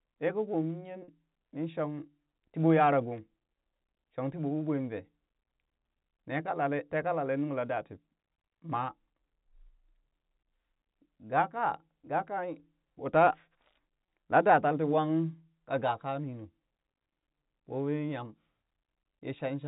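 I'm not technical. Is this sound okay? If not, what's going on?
No. Twice the speech briefly catches on a short, slightly buzzy held sound: from 1.04 to 1.08 s, and from 14.06 to 14.08 s, just before "laa da tal tii". This is packet loss with pitch repetition. Small pieces of audio, 40 ms and then 20 ms, went missing in transmission, and the receiving end filled each gap by repeating the last cycle of the voice. The speech also comes through G.711 telephone coding, which gives it the narrow sound of a phone line.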